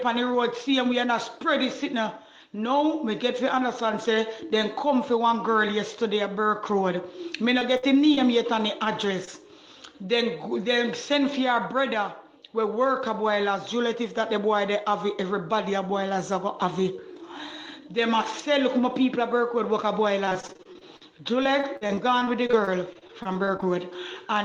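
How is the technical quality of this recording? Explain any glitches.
The recording suffers from packet loss. There are brief concealed dropouts around 8 seconds and two stretches of choppy, robotic sound near the end.

Short concealed packet loss occurs at 7.59 s, 8.15 s and 9.25 s. Each time, about 20 ms of audio never arrived. The receiver patched the hole by extending the preceding sound, then blended back. Each sounds like a quick smear or wobble.

A burst of packet loss runs from 7.77 to 7.85 s. About 60 ms went missing in one stretch. The decoder stretched the last sound and let it fade across the gap. You hear a short held buzz or hiss, then the audio jumps ahead.

Repeated packet loss, with robotic sound, covers 20.25 to 21.03 s and again 21.43 to 23.64 s. Losses kept recurring, each up to about 44 ms. Every hole was patched before the next arrived. In the first stretch about 30% is patched; in the second, about 17%. 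The result is choppy and broken.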